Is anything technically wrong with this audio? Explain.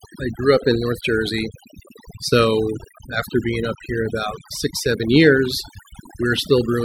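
Yes. Overdone noise removal runs throughout the speech. The noise reduction was set too strong, so it pushes individual frequency bands down or out whenever they sit near its noise estimate. Quiet parts of the voice are cut along with the noise. Pauses fall to near silence flecked with twinkling specks.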